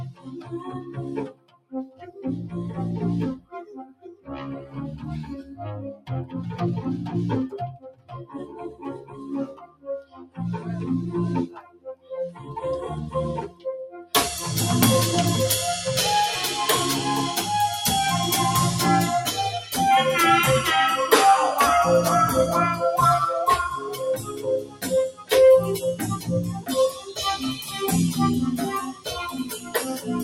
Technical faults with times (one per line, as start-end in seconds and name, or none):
0.00-30.23 noise suppressor applied to music or sounds
0.12-2.14 sound cut by the noise suppressor
3.39-4.75 sound cut by the noise suppressor
5.43-6.09 sound cut by the noise suppressor
7.78-10.39 sound cut by the noise suppressor
11.47-12.11 sound cut by the noise suppressor
13.48-14.14 sound cut by the noise suppressor
23.64-27.85 sound cut by the noise suppressor
28.54-30.23 sound cut by the noise suppressor